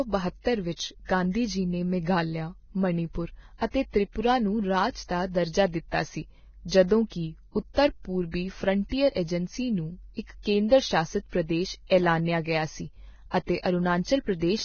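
Throughout the speech, the treble stops near 6.6 kHz and what remains above the midrange is hissy and grainy, with rough tones and smeared consonant onsets. This is likely Vorbis compression at heavy damage, consistent with roughly 18 kbps, where coarse residue quantisation replaces fine detail with noise.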